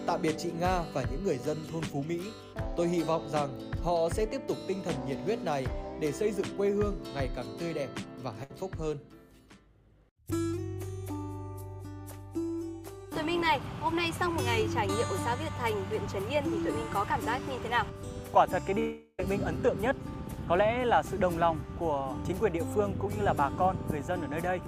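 At 8.43 s the sound briefly freezes into a short held buzz or hiss that fades over about 60 ms, then picks up slightly further on. This is a burst of packet loss: consecutive packets were lost or arrived too late, the receiver extended the last sound, and roughly 60 ms of audio is missing.

From 18.79 to 19.20 s a much longer fading buzz or hiss stretches for nearly 0.4 s, ending in a brief silence of about 30 ms before the audio returns further along. This is likely a long network dropout, with about 380 ms of audio lost while concealment filled the gap.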